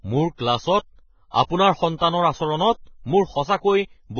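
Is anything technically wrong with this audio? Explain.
Yes. Throughout the speech there's heavy damage that's likely Vorbis compression at a very low bitrate, perhaps around 14 kbps. Nothing survives above 6.6 kHz, and the remaining treble is quantised so coarsely that its detail turns into hiss, leaving the sound grainy with roughened tones and smeared attacks.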